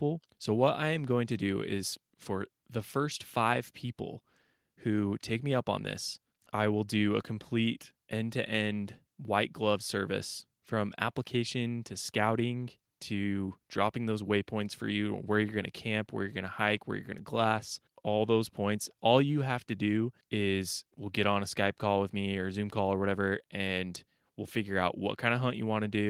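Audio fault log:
No faults can be heard anywhere in this recording.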